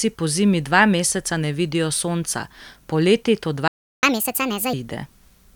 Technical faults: playback stall; catch-up at higher speed

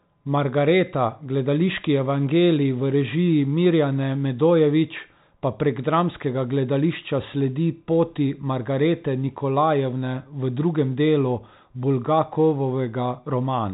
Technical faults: none

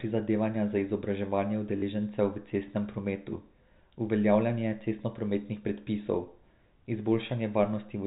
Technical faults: packet loss with last packet repeated

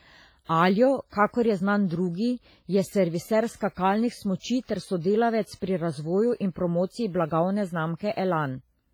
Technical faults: WMA compression; pre-echo

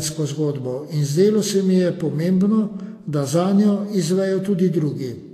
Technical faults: Vorbis compression

